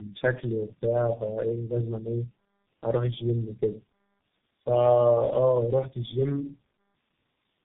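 Throughout, tandem speech coding stacks three speech codecs' damage, making speech rough, muffled and warbly; the spectrogram shows smeared harmonics and nothing above 3.8 kHz.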